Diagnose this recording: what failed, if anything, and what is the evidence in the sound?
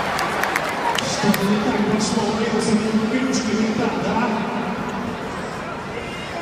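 Nothing failed in this recording. No stage of the chain, from capture to playback, leaves audible evidence of a fault.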